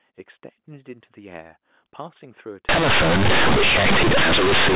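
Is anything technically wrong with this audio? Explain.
Yes. From 2.69 s to the end, companded audio is read as linear: mu-law bytes are taken as plain 8-bit samples without expansion, so the speech turns into harsh, loud, buzzy distortion with heavy noise in the gaps. Before that point the mu-law telephone coding sounds as expected, limited to below 4 kHz.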